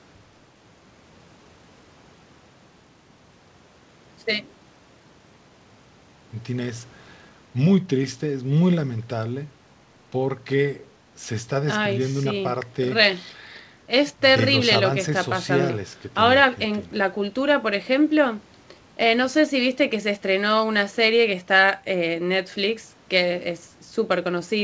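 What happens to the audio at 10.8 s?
Nothing goes wrong at 10.8 s: the speech carries on intact through the WebRTC call path, with only the band limit at 8 kHz that the call codec imposes throughout.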